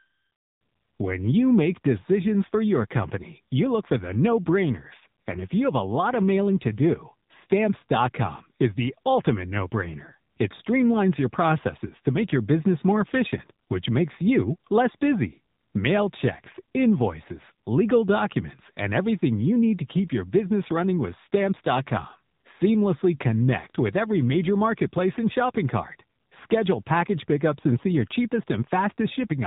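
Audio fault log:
Throughout, AMR narrowband mobile codec: nothing above 3.8 kHz survives, and the speech sounds plainly buzzy and synthetic because it's rebuilt from a vocal-tract model fed by just a few pulses per frame, which fits a low mode around 7.4 kbps.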